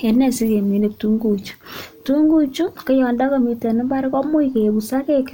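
Nothing in this speech recording stood out as a technical problem on listening.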